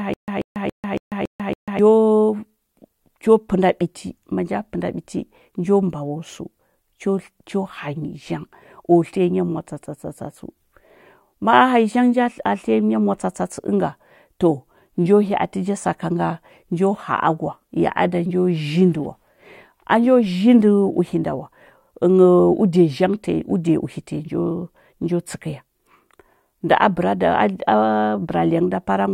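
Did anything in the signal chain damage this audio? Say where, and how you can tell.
Yes. The playback or stream stage likely stalled at the very start, giving a stutter with silent gaps that is already under way when the speech begins and lasts until 1.79 s. Each time the buffer retried, it replayed the same 136 ms fragment and then ran dry, leaving 144 ms of digital silence. The burst returns six times on an even 280 ms cycle, and whatever speech belonged in those gaps is lost.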